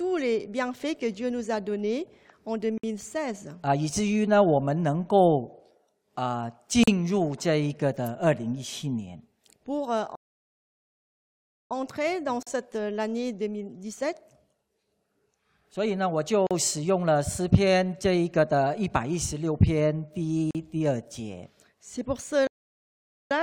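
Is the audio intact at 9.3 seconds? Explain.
Yes, at 9.3 seconds the audio is intact, with no fault audible at that moment.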